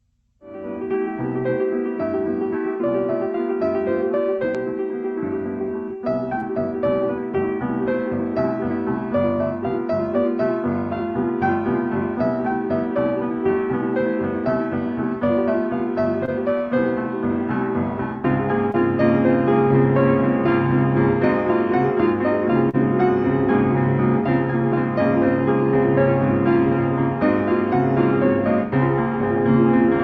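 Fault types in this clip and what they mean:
Short concealed packet loss: brief chunks of audio arrived too late to decode. The receiver filled each gap by continuing the previous sound. Quick 20 ms smears occur at 6.39, 16.25 and 18.71 s, and a longer 40 ms one at 22.69 s.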